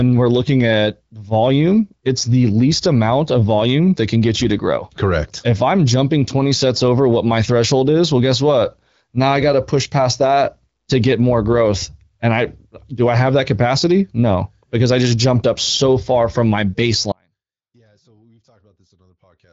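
Speech that, at 17.12 s, abruptly loses its signal and stays lost through to the end, leaving only a faint residue roughly 40 dB below the normal level rather than a pause or a fade. This is an audio dropout to a faint residue, likely a break in the wanted signal while the path after it stayed live. The band-limited sound, with nothing above about 7.5 kHz, points to the AMR wideband (HD Voice) codec at around 16 kbit/s.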